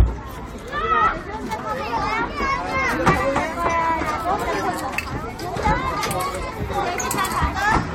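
No technical faults can be heard in this recording.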